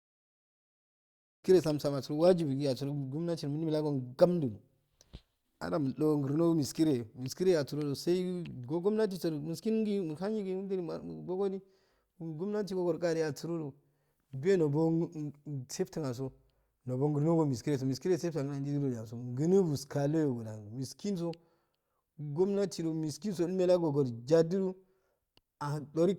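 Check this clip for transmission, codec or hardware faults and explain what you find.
Nothing stood out on listening to this speech clip, and the smooth fade-in at the very beginning is an ordinary editing touch rather than a problem.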